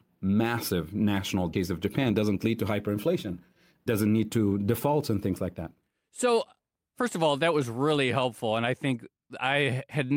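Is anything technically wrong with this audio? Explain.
Yes, there are two faults in this speech clip.

Skip ahead at 1.53 to 1.55 s: roughly 400 ms of speech never reaches playback, because it was lost in transit or discarded by an overflowing jitter buffer. The jump is unpadded, so the speech on either side butts together almost seamlessly.

Jitter buffer speed-up from 1.71 to 3.93 s: the buffer is holding more audio than its target, so the receiver repeatedly cuts out tiny pitch-period-sized slices, about 200 ms in total. The speech runs at about 109% speed with unchanged pitch and sounds slightly rushed.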